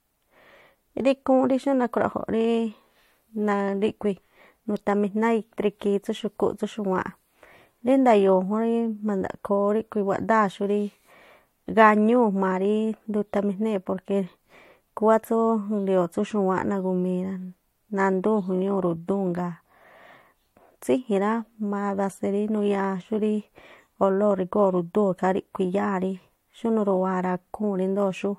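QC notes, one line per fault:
No technical faults are audible anywhere in the signal, and its level, continuity and frequency balance stay steady over the whole recording.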